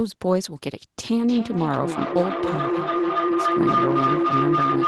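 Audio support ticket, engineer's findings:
Feedback howl: two endpoints sharing one room, mic-to-speaker loop gaining on each pass. Howl builds from 1.29 s to end of clip, narrowing to around 1 kHz, loop repeating roughly every 300 ms, peaking about 1 dB above speech level.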